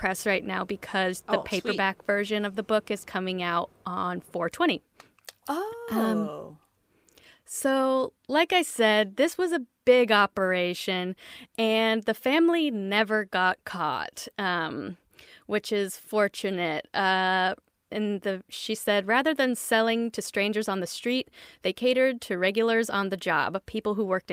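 No technical faults can be heard at any point in the audio.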